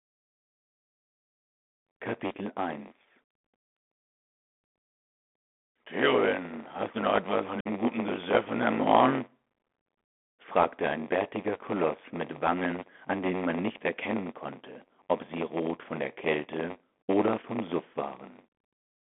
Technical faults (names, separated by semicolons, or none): block size mismatch (padded); Bluetooth CVSD headset codec; unconcealed Bluetooth headset packet loss